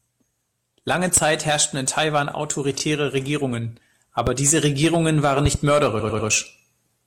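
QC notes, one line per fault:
Throughout: hard clipping. The signal is driven about 8 dB past full scale, so around one percent of samples are sheared flat at the ceiling. Those squared peaks generate high-order harmonics, heard as gritty crackle riding on the loudest syllables of the speech.
1.17–1.20, 4.27–4.29, 5.45–5.57: loud pop. Sharp transients sit on top of continuing speech. The first, just before "herrschten in", peaks about 10 dB above the signal. The second is about 20 dB. The third is a double pop at about 15 dB. They are likely from electrical steps such as switching or static.
2.77–2.80, 5.99–6.28: repeated frames. At 2.77 a 24 ms block plays twice, giving a brief stutter and adding 24 ms. At 5.99 a 96 ms block replays three extra times, a stammer, adding 288 ms.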